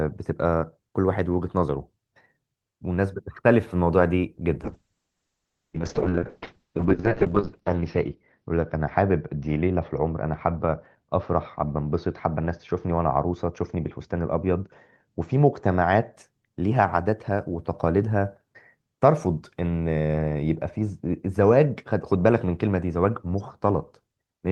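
A speech clip with a call bitrate drop from 4.64 s to 16.19 s. The audio loses its top end, narrowing from a full 20 kHz band to about 6 kHz. It turns muffled, rough and watery. The worst stretch lasts nearly 3 s. The quality is consistent with a drop from about 32 kbps to 6 kbps. The call's bandwidth estimate fell, so the encoder coded with far fewer bits until recovery.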